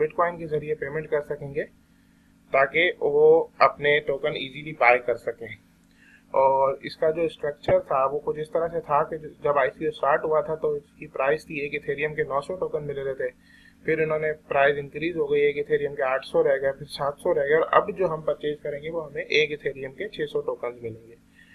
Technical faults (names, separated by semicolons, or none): DAB burbling